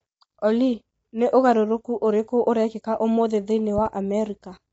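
From the start the speech sounds rough and grainy, with hiss filling the gaps between harmonics and nothing above 7.8 kHz. This is likely low-delay AAC compression (AAC-ELD), whose short frames blur pitch detail, and the damage fits a bitrate around 24 kbps.

At 3.78 s, just after "ũrĩkũ ũrekĩka ũmũthĩ thĩinĩ", two sharp pops land within 0.1 s, peaking a little above the speech, which continues underneath. A loud pop like this is likely a voltage spike from a plug, switch or driver glitch entering the signal.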